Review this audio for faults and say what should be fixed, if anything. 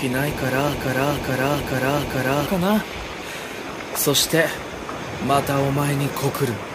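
A broken-record loop runs from 0.74 to 2.46 s: a 0.43 s fragment plays four times back to back, and whatever should have filled that stretch is gone. The likely cause is a stalled player, encoder or stream that kept re-sending the last block it held. On a waveform the same envelope repeats at identical 0.43 s spacing, and a spectrogram shows a block pattern copied exactly, ending with a hard seam. Prevention: detect stalls and output silence or resync rather than replaying the held buffer.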